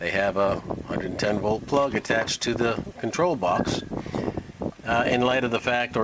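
No faults can be heard in the audio, which shows the band limit of a normally working WebRTC call path with nothing above 8 kHz, consistent with a wideband codec such as G.722.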